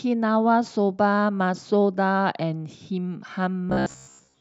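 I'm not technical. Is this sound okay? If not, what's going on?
No. From 3.70 to 4.40 s there is robotic sound from repeated short buffers: the speech turns into a stiff, metallic buzz pitched around 67 Hz. New audio likely arrived too slowly, so the software kept replaying 15 ms snippets for most of that stretch.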